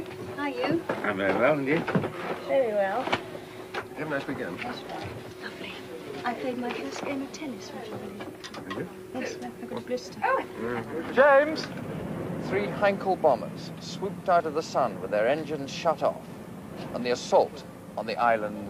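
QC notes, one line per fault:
No faults turned up anywhere in this one, so there's nothing to log.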